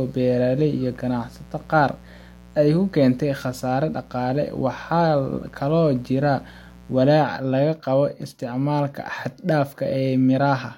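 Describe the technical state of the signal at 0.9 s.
At 0.9 s the speech carries mains buzz, present from the start of the clip until 7.08 s. Sharp switching spikes at twice the 60 Hz mains rate, likely from a dimmer, rectifier or unshielded cable, stack harmonics up to several kHz, giving a steady, raspy buzz roughly 25 dB below the speech.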